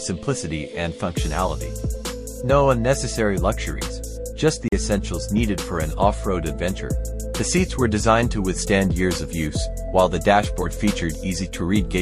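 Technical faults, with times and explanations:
4.68 to 4.72 s, Bluetooth dropout: the sound cuts out completely for about 41 ms and then carries on from a later point, as though it had kept playing through the gap. The likely cause is a wireless link that failed to deliver audio in time, so the receiver had nothing to play and filled the slot with silence. A hole of that length fits roughly two lost packets before good data arrived again.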